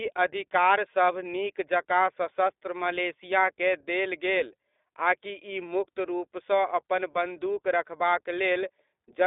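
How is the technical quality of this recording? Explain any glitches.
Technical quality is limited by one fault present for the whole clip: the speech has passed through the iLBC codec, and the damage is plainly audible.

iLBC codec: The band runs from about 300 Hz to 3.6 kHz, with nothing above 3.8 kHz. The codec works in 20 ms frames, each coding its excitation independently of the previous frame, and the data rate fits iLBC's 15.2 kbps mode. That frame-by-frame modelling gives the speech a rough, slightly synthetic texture on top of the dull, telephone-band tone.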